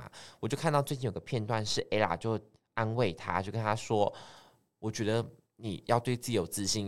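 From 0.89 s to 4.37 s the speech turns dull and muffled, the result of de-emphasis applied wrongly. A treble-cut filter meant to reverse a pre-emphasis boost has been run on audio that carried no such boost, or has been applied a second time. The response falls away smoothly above the midrange, ending about 8 dB lower at 10 kHz than at 1 kHz, so consonant detail and air are lost until the section ends.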